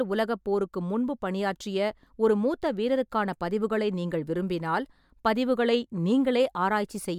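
Speech recording; no audible technical faults.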